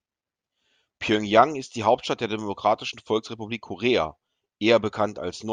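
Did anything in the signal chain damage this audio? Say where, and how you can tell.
No, nothing in the chain audibly damaged this speech recording. No stage, from capture to playback, leaves any trace in the sound.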